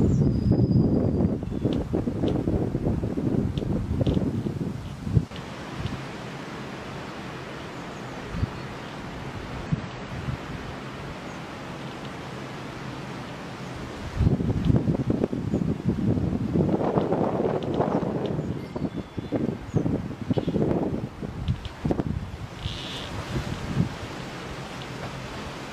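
At 2.56 to 2.61 s, 9.66 to 9.71 s and 18.72 to 18.77 s, brief blips break through. Each is damaged data in a compressed stream. Corrupted bytes make the decoder misread frames and lose sync. It scrambles for about 50 ms before recovering.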